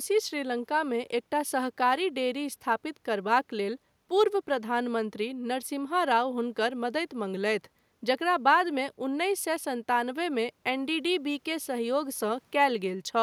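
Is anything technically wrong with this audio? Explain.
No, nothing technically wrong can be heard in this speech recording, and the signal stays intact throughout.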